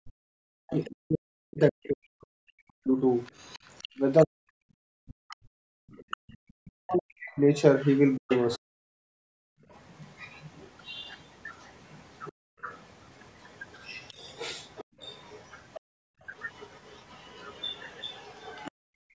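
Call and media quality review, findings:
Speech suppressed in double talk, 0.0–8.64 s and 12.32–12.65 s. Talker's level dips in pieces, deepest roughly 40 dB, about five seconds affected in the first span and a brief dropout in the second. Likely echo canceller ducking near-end speech during double talk. Distinct from gating: the voice itself drops while the far side speaks, not just the room sound.

Other side's voice leaking through, 0.84–18.71 s. A second voice comes through under the talker, well below it, roughly 25 dB down. Likely residual loudspeaker echo the canceller failed to remove. Distinct from crosstalk or a second person in the room: it tracks the far-end talker.

Background gated by the echo canceller: 5.58–6.28 s (about 38 dB), 8.92–9.69 s, 14.84–16.23 s and 18.71–19.19 s (each about 40 dB). Room tone drops out while the loudspeaker plays and returns on release. Distinct from a noise gate: the dips follow far-end activity rather than pauses in near-end speech. 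Band-limited to 8 kHz by the call microphone processing, which is expected.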